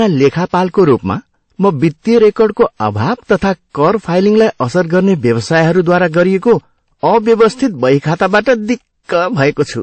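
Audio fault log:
throughout hard clipping: the speech was driven about 7 dB past what the stage could pass, flattening peaks on roughly 2 percent of samples, so loud syllables crackle with harsh high harmonics.
throughout transcoding between lossy codecs: nothing is heard above 8.3 kHz, and two codecs' artefacts are heard together, likely from an MP3 encode near 35 kbit/s re-encoded as WMA near 48 kbit/s.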